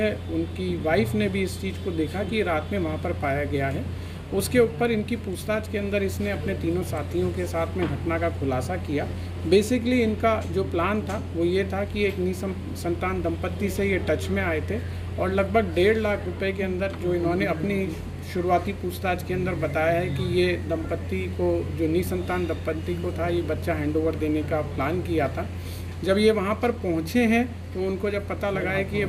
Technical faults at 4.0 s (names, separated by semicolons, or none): none